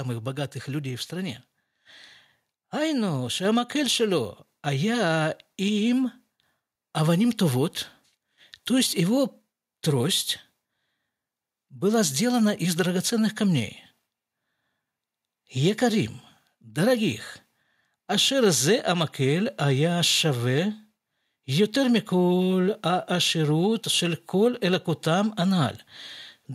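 At 3.45 s the microphone volume steps up by about 3 dB, then again at 4.47 s by about 2 dB, just before "а я им". The call software raised the input gain in one jump each time, so voice and background get louder together.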